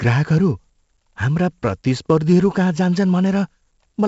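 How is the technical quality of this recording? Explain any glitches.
Quality is fairly rough throughout. The whole recording carries 4-bit ADPCM compression, and the damage is heavy. Each sample is coded as a small step from a predicted value, with the step size adapting as it goes, so the error rides along with the speech level. Louder moments get a gritty hiss and sharp onsets smear where the step can't grow quickly enough. Nothing reaches above 7.7 kHz, which fits roughly a 16 kHz sample rate at 64 kbps, and that's why it sounds dull.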